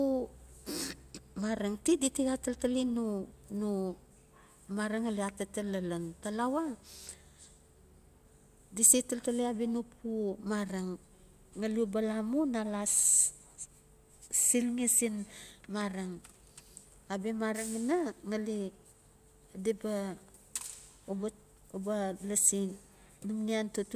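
Listening through the speech recording, nothing stood out as a technical fault at any point.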